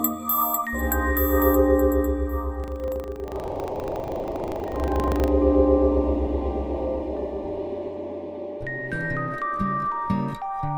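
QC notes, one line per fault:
2.56–5.30 s, buffer tearing: a rattly 25 Hz buzz, a small slice of each period replaying audio from about 70 ms back, hard-joined either side.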